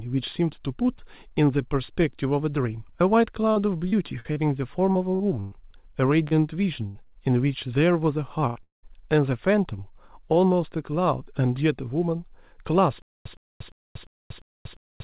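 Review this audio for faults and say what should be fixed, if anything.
Between 3.52 and 5.55 s the speech breaks up into choppy, robotic fragments. This is repeated packet loss: seven separate holes, about 0.36 s of audio missing in total, with the longest hole 119 ms. The receiver patched each one by extending the previous sound, so roughly 18% of that stretch is synthetic filler. On a spectrogram the harmonics freeze into flat, smeared bands at each hole, and the waveform shows short, overly regular repeated cycles. A larger adaptive jitter buffer and forward error correction or redundancy on the sending side would prevent this.

Two short concealed packet losses occur at 6.28–6.34 s and 7.07–7.14 s, each losing about 40 ms. The decoder bridged each hole by continuing the last pitch or noise and then crossfading back, which is heard as a brief smear or wobble. A consonant in that spot may be swallowed. 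On a spectrogram each one shows as a short stretch of smoothed, stretched texture, and the waveform shows a slightly too-periodic patch before the real signal resumes. Redundant encoding or in-band FEC would let the receiver recover such single losses instead of guessing.

Bursts of packet loss occur at 6.87–6.98 s and 8.47–8.58 s, each removing about 80 ms. The concealment held the last sound and faded it, so the speech turns into a brief held buzz or fading hiss and then jumps ahead. A spectrogram shows horizontal streaks that decay in level, with a discontinuity where real speech returns. The waveform amplitude tapers and then restarts abruptly. Interleaving or FEC spanning several packets, plus a steadier network route, would prevent these.

Directly after the second burst, 8.63–8.86 s is a long network dropout, likely caused by the stream briefly stalling. About 200 ms of speech is lost. 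A short fading continuation is followed by roughly 150 ms of silence. On a spectrogram this is a fading smear that ends in an empty column, and the waveform shows a decaying tail and then a flat line. Better network stability and a jitter buffer able to absorb longer delays would avoid it.

From 13.02 s to the end the audio stutters with silent gaps, likely from a playback stall. A 114 ms fragment repeats every 349 ms, separated by about 236 ms of digital silence, and no new audio arrives. A spectrogram shows identical blocks at an even spacing separated by blank bands, and the waveform shows copies of the same burst between near-flat segments. The player should stop or report the underrun rather than replaying its last buffer.

The narrow bandwidth, with nothing above 4 kHz, fits a 64 kbps G.711 telephone-band call path.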